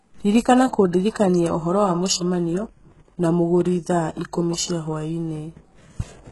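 From start to finish the speech carries HE-AAC compression damage, likely from a very low bitrate near 12 kbps. The treble is a rebuilt copy of the lower bands rather than the original, so s sounds come out gritty, lispy and metallic, with heavy overall coding damage. On a spectrogram, energy stops at a hard ceiling at 11.5 kHz, and the band below it shows smeared, repeated patterns that mirror the lower harmonics instead of lining up with them.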